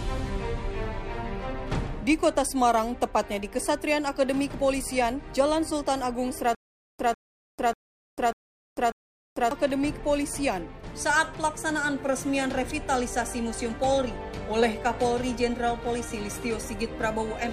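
From 6.55 to 9.51 s there is a stutter with silent gaps. A short burst of about 148 ms plays, then drops into dead digital silence for about 445 ms. The same burst returns five times at an even 593 ms pace. The cause is likely a stalled player or stream that replays its last fragment at each retry and then runs empty. Whatever audio belonged in that stretch never arrives.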